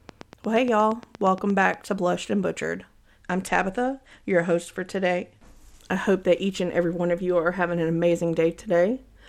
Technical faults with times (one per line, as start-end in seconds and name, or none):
0.09-1.75 train of clicks
3.23-5.81 Bluetooth SBC bit pool drop